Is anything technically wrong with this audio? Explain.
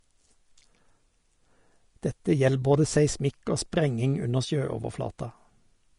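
Yes. Throughout, the speech sounds hissy and grainy, with nothing above 10.6 kHz. This is likely Vorbis compression, which fits a low bitrate around 35 kbps, with treble quantised into noise.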